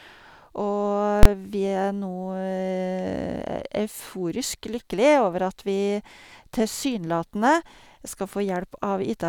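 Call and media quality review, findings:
Invalid numbers at full scale, 1.23 to 1.25 s, just before "vi er". Single hard bang. Probable component: DSP stage producing infinite or invalid samples, clamped to full scale. The 23 ms span fits one 1024-sample block. Waveform: flat at one extreme value, beyond the speech peaks, for the block, square edges. Spectrogram: bright full-band vertical stripe at each edge.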